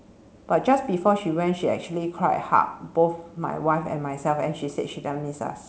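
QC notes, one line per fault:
The speech arrives through a wideband call path with its content stopping at 8 kHz, a band limit and coding character that fit G.722 at around 64 kbps, and nothing in the signal departs from what that path normally produces.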